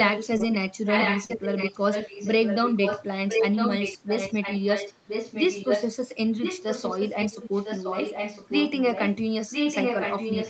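Speech that's come through a call, and the main trouble is echo leak running through nearly the whole thing. A copy of the voice comes back about a second late (1005 ms) in stretches at 0.04–0.58, 0.85–3.05, 3.28–5.92, 6.37–9.18 and 9.50 s to the end. It sits only a little under the speech, around 5 dB down, and in the 0.85–3.05 s and final stretches it's about as loud as the talker. The likely cause is someone on a loudspeaker whose echo canceller isn't catching what their mic picks up, so it gets sent right back. There's also short concealed packet loss at 0.37–0.41 s and 1.25–1.31 s, where about 20 ms and then 40 ms of audio never arrived in time. The receiver papered over each gap by stretching the last bit of sound and then blending back in, so you hear a brief smear or wobble rather than a clean dropout. The band stops at 8 kHz, which fits Opus running wideband at 32 kbps.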